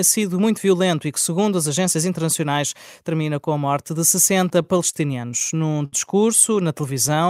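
From 4.49 to 4.95 s there are repeated stalls, a stutter. Packets arrived late, so the buffer ran dry four times. The receiver stretched the last sound over about 56 ms, and nothing was lost. The same happens again from 5.31 to 5.94 s across five gaps, the longest 72 ms, so the sound drags and catches. From 6.67 to 7.28 s a jitter buffer slow-down follows. The receiver repeated pitch periods to rebuild its reserve, adding 53 ms. The sound runs at 93% speed, drawn out at an unchanged pitch.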